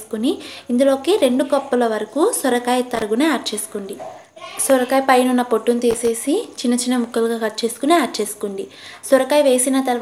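At about 2.94 to 3.02 s and again from 5.91 to 6.08 s there's loose connector crackle: a worn or dirty contact keeps making and breaking, chopping the signal, so you get short, ragged bursts of scratchy crackle.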